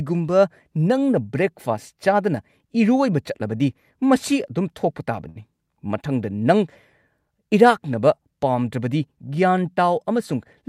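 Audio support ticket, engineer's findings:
Short stall from a late packet at 5.29–5.39 s, just after "ꯑꯗꯨꯝ ꯊꯣꯛꯄ". Speech held too long with slight buzz or dip. Jitter buffer ran dry; receiver stretched last sound about 63 ms until packet arrived, then resumed same point. Nothing missing; delay grows 63 ms.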